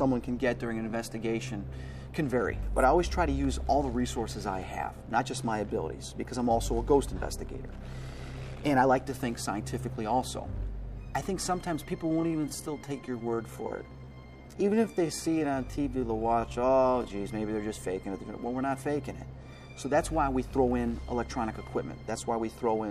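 From 11.92 s to 17.1 s the audio abruptly drags, running at about 0.71 times its normal pace while its pitch stays unchanged. This is a time-stretched section, likely from software lengthening that stretch to fit a set duration by repeating short pieces of sound.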